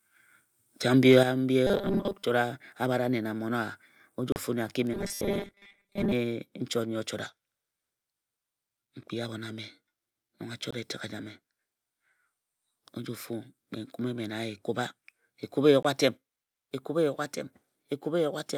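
At 1.10 to 1.17 s the loudest peaks of the speech flatten against the converter's limit, overshooting by about 2 dB, and the waveform tops are squared off. This is likely microphone overload: the input level drove a small share of samples into the converter's ceiling, and the clipped tops add a brief harsh, crackling edge to that syllable.

At 1.23 s the whole signal, speech and background alike, drops by about 6 dB in one step, and a second step of about 4 dB follows at 16.17 s. This is microphone volume stepped down, likely automatic gain control in the call software lowering the device input. The first step comes right after the clipped peak at 1.1 s, which fits software reacting to the overload.

From 1.67 to 2.24 s, and again from 4.93 to 6.12 s just before "chot nnyi o", the speech turns into a stiff metallic buzz at 200 Hz that still roughly tracks the syllables. This is robotic sound from repeated short buffers, likely caused by audio arriving too seldom: a 5 ms slice, one period of the 200 Hz buzz, is looped to fill the gaps, and most of the real audio in those stretches is skipped.

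At 4.32 s the output cuts to silence for 37 ms, and shorter cuts of about 19 ms follow at 10.71 s and 15.83 s. These are Bluetooth dropouts, likely packets reaching the headphones too late and being discarded. The first length fits two lost packets and the others fit one each. After each gap the speech resumes further along, as though it had kept playing through the hole.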